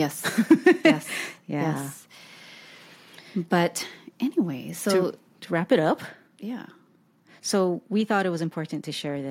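From 0.5 to 0.91 s the loudest syllables take on a harsh, crackling edge with flattened tops, pointing to microphone overload. The likely cause is input gain set so high that peaks ran about 4 dB past the converter's ceiling, clipping a small share of samples. Unlike a naturally loud, clean voice, the waveform is squared off rather than just big.

At 0.52 s, during that distorted stretch, the whole signal drops by about 2 dB in a single step, marking microphone volume stepped down. Software likely reacted to the clipping by lowering the device's input level. The background falls along with the voice, which separates it from a gradual fade or a noise gate acting on the quiet parts.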